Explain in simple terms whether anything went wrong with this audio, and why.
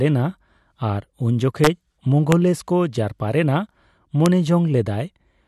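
Integer overflow cracks the speech at 1.64 to 1.67 s, 2.32 s and 4.26 s: loud peaks exceeded the number range and wrapped to the opposite extreme instead of being limited.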